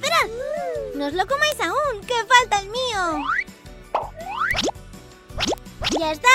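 Bit error spikes at 1.52 s, 4.51 s and 5.58 s: each is a single sample jumping by a power of two, heard as one sharp broadband tick unrelated to the sound.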